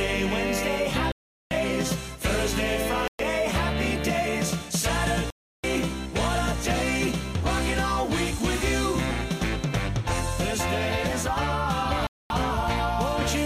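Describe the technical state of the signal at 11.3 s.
At 11.3 s the signal is intact, with no fault present at that moment.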